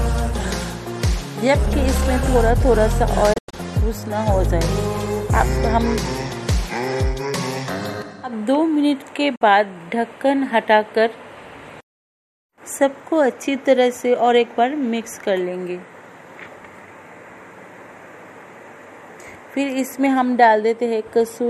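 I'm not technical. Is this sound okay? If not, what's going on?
No. Twice the receiver lost the digital signal and went silent until good data returned, a digital broadcast dropout. Around 3.33 to 3.54 s the sound breaks into several brief holes; at 9.35 s there's one short gap. Whatever was playing then is missing.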